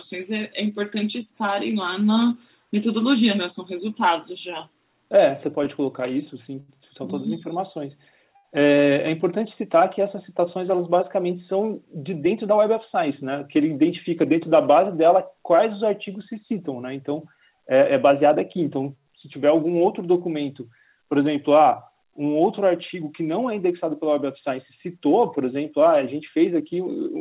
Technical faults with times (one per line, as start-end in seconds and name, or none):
6.60-6.70 short stall from a late packet
8.36-8.46 short stall from a late packet
12.16-12.97 jitter buffer speed-up
17.81-18.35 jitter buffer speed-up